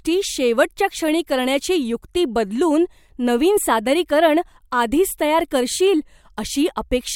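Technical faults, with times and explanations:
No technical faults can be heard in the speech, so there are no times or explanations to give.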